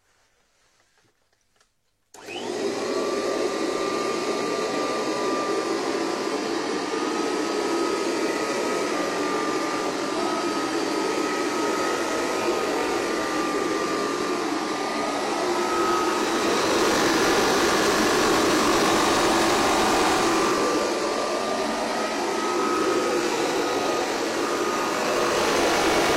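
Damaged data in a compressed stream gives brief glitches at 8.87–8.92 s and 10.13–10.19 s, where the decoder loses sync, unlike a dropout's clean silence.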